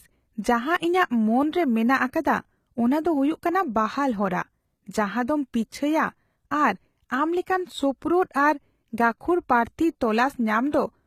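All the way through, the speech has that gritty, lispy treble you get from HE-AAC compression, the likely cause. The top end sounds bright, reaching about 20.7 kHz, but it's copied up from lower bands rather than kept, which fits a very low bitrate around 20 kbps.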